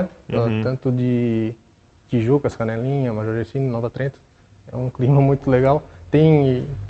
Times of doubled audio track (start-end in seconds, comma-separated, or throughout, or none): none